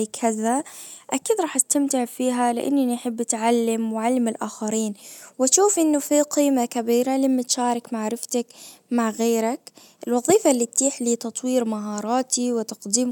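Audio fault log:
No technical faults are present in the signal at any point in the recording.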